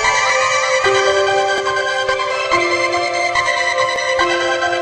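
At 0.3 s, 1.58 s, 2.58 s and 3.96 s the audio jumps ahead, losing roughly 70, 40, 20 and 20 ms. The likely cause is a dropped buffer (overrun): samples were overwritten before being read, so the surrounding audio joins directly.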